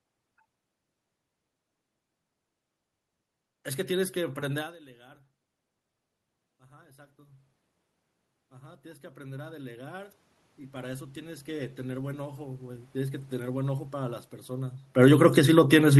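From 6.58 to 7.55 s the automatic gain rises. The speech level at the microphone has dropped by about 22 dB, around where the talker moves near 4.5 s. The control answers by lifting its gain about 4 dB. A second, longer rise runs from 8.49 to 13.33 s, adding about 16 dB. The voice swells slowly. The room noise swells with it, because the gain lifts everything the microphone picks up.

From 14.86 to 15.94 s the automatic gain falls. Near 15.0 s the talker moves again. After the long boost, the input is too loud for the gain, or its background noise too strong. The control pulls its gain down by about 6 dB over roughly a second. The voice starts loud, then sinks. The background noise sinks with it, showing the change comes from the gain stage, not the talker.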